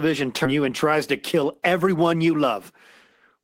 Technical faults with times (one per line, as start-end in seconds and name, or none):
0.45 skip ahead
0.55-2.55 jitter buffer speed-up